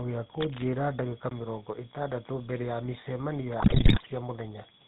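Throughout, the audio has passed through the GSM full-rate codec, at a rate that fits its 13 kbps mode. The codec rebuilds speech from a vocal-tract model driven by regularly spaced pulses and discards everything above 4 kHz. The result is plainly audible: muffled, buzzy and gravelly.

From 0.36 to 0.74 s there is cable scratch noise, likely a worn cable or connector being moved so that its contact resistance flickered. Ragged, uneven bursts of scratching and rustling sit about 10 dB below the speech for that short stretch.

At 1.29 s the input switches to a poorer device, likely another microphone or a headset's call profile. There is a 20 ms gap at the switch. From then to the end, the level is about 5 dB lower and the tone changes. A faint new noise floor, roughly 35 dB down, runs underneath.

From 3.60 to 4.07 s, GSM bit errors corrupt the decoded speech. Flipped bits reaching the decoder distort its filter, pitch and gain values. 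This fits roughly 7 percent of bits wrong across 23 frames, and it is heard as squawks, pops and gargling.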